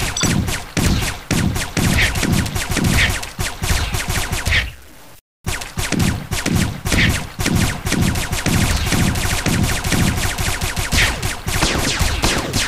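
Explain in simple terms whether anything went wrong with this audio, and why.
Low bit depth without dither runs through the whole clip, from start to finish. The audio has a grainy, gritty roughness that changes along with the sound and is worst in quiet moments. This likely comes from storing it with very few steps of loudness, about 7 bits, and simply chopping off the rest.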